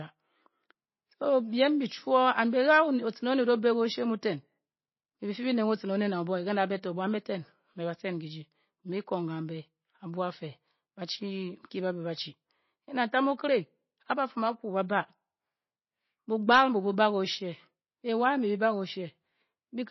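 From start to finish the speech carries what is likely MP3 compression at a low bitrate, around 24 kbps by its sound. The damage is plainly audible. Nothing remains above about 5.8 kHz, so the treble is cut off flat. Weak frequency lines drop in and out from frame to frame. That gives the sound a watery, swirling quality. S sounds turn metallic and chirpy. Consonant attacks smear.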